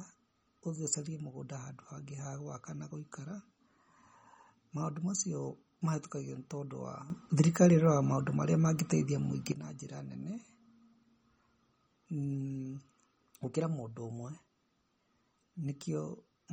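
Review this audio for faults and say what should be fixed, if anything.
The speech carries plainly audible MP3 compression throughout, likely from encoding at a low bitrate; the damage fits something around 32 kbps. Nothing is present above 18.5 kHz, where the encoder cut the treble. Under this bit budget, weak spectral lines drop in and out from frame to frame, giving the watery, swirling texture and metallic edge on sibilants, and consonant onsets smear. Prevent it by encoding at a higher bitrate or keeping a lossless copy.

A sudden gain jump of about 12 dB runs from 7.1 s to 9.52 s. The level rises abruptly at 7.1 s and falls back just as abruptly at 9.52 s, with the speech and the background noise moving together. This points to a likely digital gain change applied from one sample to the next with no ramp. Prevent it by smoothing any gain change over several milliseconds rather than switching it instantly.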